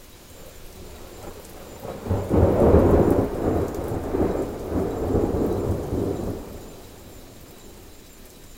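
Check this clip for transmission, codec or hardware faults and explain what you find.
One fault runs through the whole clip: the audio was read two samples at a time (double speed). Throughout, the reader treated each pair of consecutive samples as a single frame, as if the stream held two channels or samples twice as wide. Half the frames are discarded in effect, so the sound plays at 2x speed and a full 12 semitones higher, an octave up.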